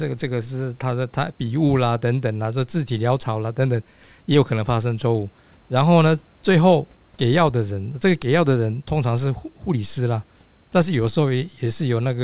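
Nothing goes wrong in this recording: the speech comes through a narrowband phone-style call path that tops out around 4 kHz, with faint room noise sitting about 40 dB below it.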